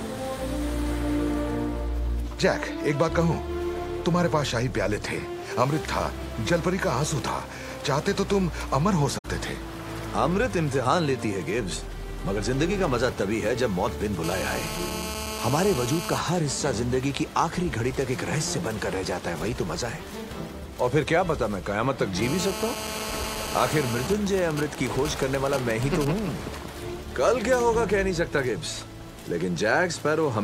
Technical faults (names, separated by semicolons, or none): AAC frame loss with muting; GSM phone buzz; GSM signalling bursts